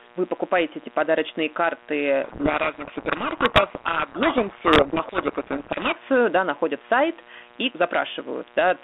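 A steady, raspy buzz sits under the speech from start to finish, about 25 dB below it. This is mains buzz: switching spikes from a dimmer, rectifier or unshielded cable enter twice per 60 Hz cycle, spreading harmonics of 60 Hz well up into the kilohertz range.

From 2.24 s to 5.97 s the speech is buried in harsh, grinding distortion, then abruptly clears. This is a codec payload misread. The speech is carried through a telephone band of roughly 250 Hz to 3.5 kHz, and its light coding texture fits 32 kbit/s G.726 ADPCM. For this stretch the decoder reads the G.726 code words with their bits in the wrong order, so the samples' corrections come out wrong.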